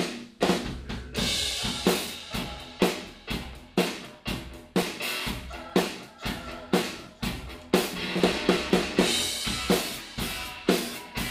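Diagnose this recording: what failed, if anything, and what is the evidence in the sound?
Periodic USB or driver dropouts, at the driver or buffer stage. From 1.95 s to 9.45 s a short tick recurs every 0.125 s, around seventy in all. Each is a gap of roughly 2 ms filled with silence, as a recurring background task stalls the bus or driver.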